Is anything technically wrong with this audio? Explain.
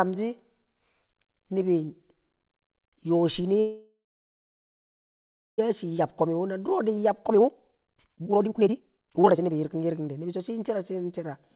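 Yes. There are two faults, heard through a narrowband call path with nothing above 4 kHz.

A call audio freeze runs from 3.6 to 5.6 s. The likely cause is packets delayed in transit, leaving the jitter buffer empty. The receiver stretches the last sound into a brief fading buzz, then about 1.6 s of silence, filling nearly 2 s in total. When packets resume, the speech picks up where it stopped. Almost nothing is lost, but a 2-second hole and added delay remain.

A jitter buffer speed-up follows from 5.84 to 10.4 s. The backlog that built up during the stall makes the buffer hold more than its target. The receiver trims it by cutting out short pitch-period pieces again and again, removing roughly two seconds of audio. The speech plays at about 143% speed while keeping its pitch, so it sounds rushed until the delay returns to normal.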